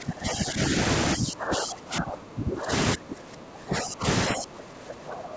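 From 0 to 0.73 s, 1.15 to 2.72 s, 2.95 to 4.06 s and 4.27 s to the end, the speech sinks by as much as about 20 dB. This is likely speech suppressed in double talk: with the far side talking over it, the echo canceller mistook this talker for loudspeaker echo and turned it down. Unlike packet-loss dropouts, the dips are long stretches rather than short, clean gaps.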